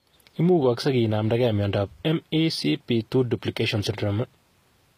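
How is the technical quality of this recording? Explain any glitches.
Technical quality is noticeably degraded by plainly audible codec damage across the whole recording. Throughout, sibilants sound gritty and lispy, with synthetic-sounding treble stopping near 15.5 kHz. This is likely HE-AAC compression: upper bands are copied from lower ones rather than kept, which fits a low bitrate around 24 kbps.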